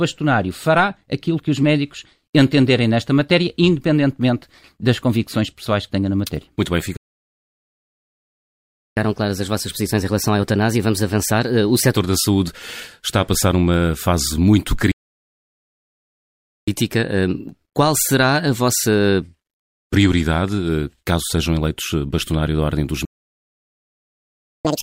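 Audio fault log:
6.97–8.97 s, 14.91–16.68 s, 23.05–24.65 s, playback stall: the speech cuts out mid-flow into silence for 2.0 s, 1.76 s and 1.6 s. The player most likely ran dry of buffered data or its output thread was blocked.
8.97–11.97 s, 16.68–19.68 s, 24.65 s to the end, catch-up at higher speed: after each gap the speech runs faster and higher, at 1.15× (about two semitones up), 1.1× (about a semitone and a half), and finally 2× (nearly an octave). The player is resampling its backlog to recover the time lost in the stall.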